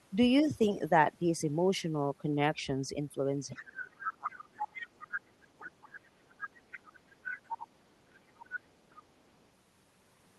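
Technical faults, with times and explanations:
3.49 to 9.03 s, other side's voice leaking through: a second, separate voice appears at 3.49–3.54, 3.97–4.13, 4.29–5.15, 6.39–6.92, 7.1–7.67, 8.43–8.59 and 8.9–9.03 s. It ranges from barely audible to not far below the talker. This is likely loudspeaker playback that the echo canceller failed to remove. It differs from suppression because extra sound is added rather than taken away.
3.52 to 6.53 s, speech suppressed in double talk: for about three seconds the talker's level sinks, at its deepest by around 30 dB, while the far side comes through. The likely cause is an echo canceller that could not separate the two voices and turned both down. Here the talker's own voice goes missing instead of a stray one being heard.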